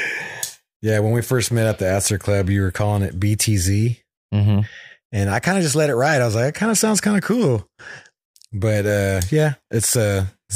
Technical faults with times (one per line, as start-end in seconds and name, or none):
none